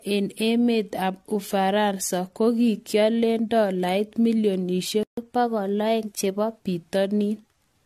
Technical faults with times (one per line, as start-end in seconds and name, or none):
0.00-7.86 generation loss
5.03-5.17 playback stall
5.17-6.60 catch-up at higher speed